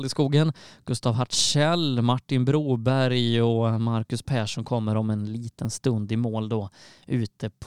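The clip is speech with a single jump at 5.65 s, where the sound skips ahead without any gap. That seamless skip, with roughly 10 ms missing, marks a likely dropped buffer (overrun), unlike a dropout, which would leave a brief silence.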